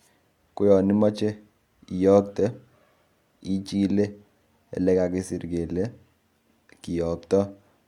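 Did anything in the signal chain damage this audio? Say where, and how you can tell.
No, nothing in the signal chain audibly damaged this speech.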